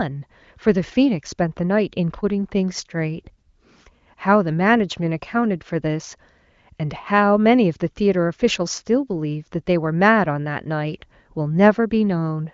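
Nothing goes wrong anywhere here. The speech comes over the AMR wideband (HD Voice) codec at what sounds like one of its higher rates, around 23 kbit/s, so it just tops out near 7.4 kHz the way HD Voice calls normally do.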